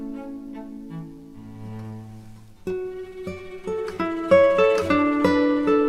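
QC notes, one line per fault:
No faults detected; nothing to log.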